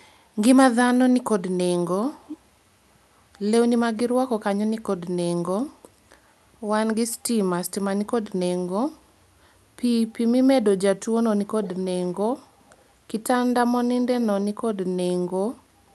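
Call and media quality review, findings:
Echo leak, speech clip: short delayed copies of the speech at 2.25–2.38 s and 11.63–11.79 s, roughly 15 dB under the direct speech, plus a much fainter scrap at 12.72–12.77 s. Fixed lag of 221 ms each time. Likely a far-end loudspeaker echo canceller letting residual mic pickup back into the call. Distinct from room reverb: a discrete, consistently delayed repeat in brief fragments, not a continuous decay smeared onto the direct sound.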